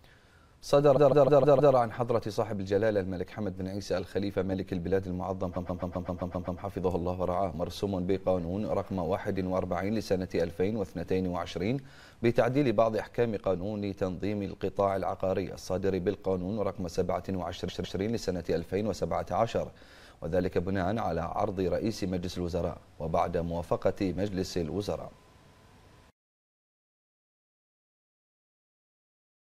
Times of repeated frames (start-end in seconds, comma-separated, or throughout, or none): 0.96-1.74, 5.55-6.60, 17.67-17.99